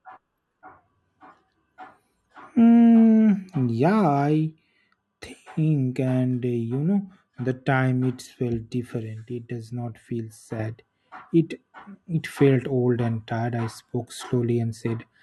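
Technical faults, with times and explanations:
10.59 s to the end, sudden gain jump: right after "it does not feel" the level steps up by about 6 dB with no fade, and the background noise climbs right along with the speech, so it isn't someone just talking louder. Everything after that point stays at the higher level. The likely cause is a digital gain setting applied instantly, from one sample to the next, with no ramp to smooth the change.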